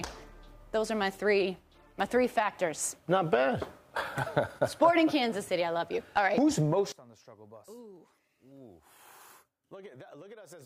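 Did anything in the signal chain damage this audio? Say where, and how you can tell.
Yes. From 6.92 s to the end of the clip, the sound collapses by about 23 dB, with the centred content nearly gone and only a faint residue left. That is the signature of one channel inverted, likely from a polarity swap in the analogue wiring. When the two sides are summed to mono, their shared content cancels and only the difference between them survives.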